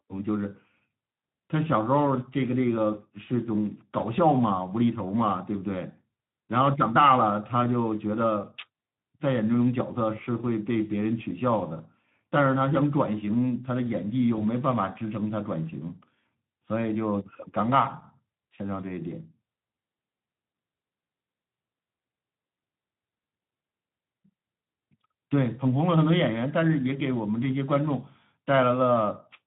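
Speex codec damage, throughout: the low bit budget starves the excitation, leaving the speech plainly hoarse and noisy, which fits a setting around 11 kbps. VoIP packet loss concealed by the speech codec, 14.36 to 14.43 s: the decoder extrapolates its last pitch and filter, producing a brief, fading smear, consistent with one lost 20 ms frame.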